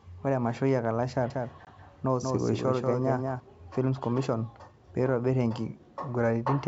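A speech clip carried over what sounds like a wideband telephone link with faint upper-band hiss, and it shows two faults. From 1.30 to 3.40 s there is a doubled audio track: a full-band second copy of the speech trails the original by around a fifth of a second at about 5 dB lower level, most likely because the same signal was also picked up by a slower path. Unlike room echo or reverb, the copy has no decay tail or added colouring, and it switches on and off abruptly at those two times rather than fading. Inside that stretch, at 1.65 to 1.67 s, packet loss on an ADPCM call cuts a hard-edged 20 ms gap, which fits a couple of lost packets. What separates this from a plain dropout is the aftermath: once the gap ends, the decoder's predictor and step size no longer match the sender's, so the speech comes back slightly distorted before settling within a few tens of milliseconds.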